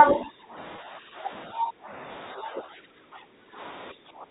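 Speech suppressed in double talk runs from 0.04 to 1.29 s, 1.47 to 2.11 s, 2.32 to 3.59 s and 3.92 to 4.3 s. The likely cause is an echo canceller that treated simultaneous talk from both ends as loudspeaker echo and pulled the near-end speech down along with it. The speech sags, thins and breaks up in patches, by around 10 dB in the first stretch and around 15 dB in the later three.

Packet loss with pitch repetition sits inside two of those stretches, at 0.76 to 0.78 s and 2.66 to 2.68 s. Each gap is 20 ms, which fits a single lost packet, and the receiver filled it by repeating the last pitch period. Because the gaps are so short, each one comes through as a brief held, buzzy tone, heard through the narrow G.711 telephone band.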